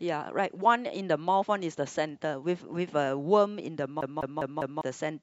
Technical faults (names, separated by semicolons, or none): CD stuck on one turn